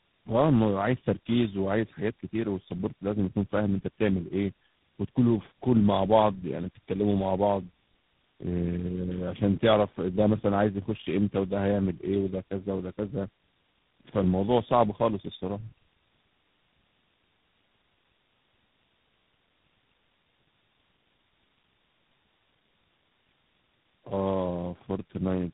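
Across the whole recording, the speech carries the layered damage of tandem speech coding: it sounds rough, muffled and warbly, the way audio does after passing through three speech codecs in a row, likely AMR-NB, then GSM full rate, then G.726, with G.711 links between them. Each coder works on the previous one's errors, so the distortion compounds. A spectrogram shows nothing above 3.8 kHz and smeared, blurry formant bands.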